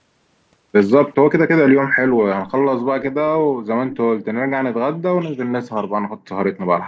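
At 2.07 to 2.19 s the room sound behind the speech dips by about 10 dB, then recovers. This is background gated by the echo canceller: while the far-end loudspeaker was playing, the canceller pulled the microphone down.

From 3.91 to 3.98 s a faint, brief copy of the speech surfaces about 15 dB below the main level, trailing by 401 ms. This echo leak is likely the far side's canceller failing to remove its own loudspeaker pickup, so the residue was sent back.

The same gating returns harder at 6.02 to 6.22 s and again at 6.83 to 6.87 s. Each time the background drops out almost completely, by about 40 dB.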